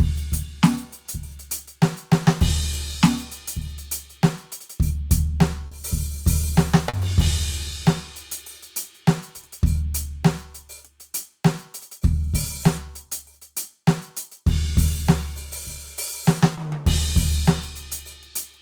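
Short concealed packet loss at 5.67–5.73, 6.89–6.95 and 16.55–16.59 s: 40, 40 and 20 ms of music went missing, and the receiver extended the preceding sound, leaving brief smears.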